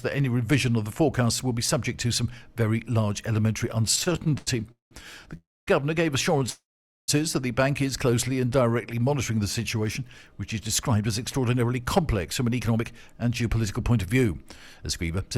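From 3.91 to 4.93 s the audio drags and stutters through fourteen short stalls, each bridged by a held or fading continuation of the sound just before it, the longest about 194 ms. Together they fill roughly 416 ms, about 41% of that second, with nothing lost. These are repeated stalls (stutter): packets kept arriving late or too slowly, so the jitter buffer drained again and again and the receiver stretched the last sound until data caught up.

At 5.37 s the sound freezes into a brief fading buzz, then about 250 ms of silence, and resumes at 5.69 s. A longer freeze runs from 6.50 to 7.10 s, about 584 ms in all with some 470 ms of it silent. Both are call audio freezes. Delayed packets likely emptied the jitter buffer, and the receiver faded out the last sound while it waited. Playback then continued where it stopped, adding a gap of 301 ms and then 584 ms without dropping any sound.

From 8.10 to 9.01 s the audio slows to about 87% speed at unchanged pitch, with drawn-out sounds. 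This is a jitter buffer slow-down. To rebuild its reserve, the receiver repeated single pitch periods and slices of pauses, adding about 126 ms.

From 10.47 s to 15.31 s the audio runs hurried at about 109% speed, still at its own pitch. This is a jitter buffer speed-up. Holding more audio than its target, the receiver kept cutting out short pitch-period pieces, shortening this stretch by about half a second to bring the latency back down.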